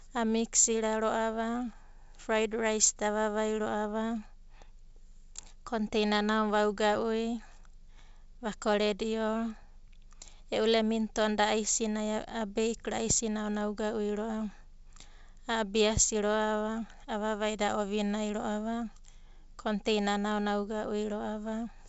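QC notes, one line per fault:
No faults found in this speech clip.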